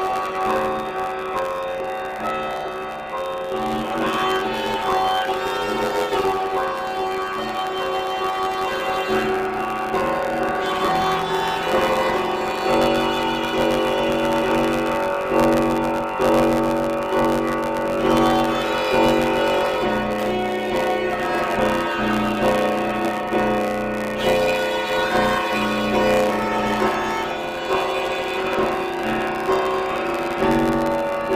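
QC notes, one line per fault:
Throughout: planar audio read as interleaved. Each 10.88 ms block stores one channel's samples, then the other's, but is read as alternating pairs. Each block plays twice at double speed. Blocks this short give a robotic buzz at 91.9 Hz, with no clear octave shift.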